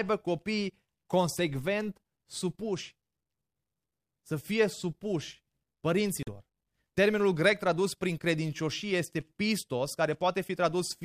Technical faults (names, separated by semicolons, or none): Bluetooth dropout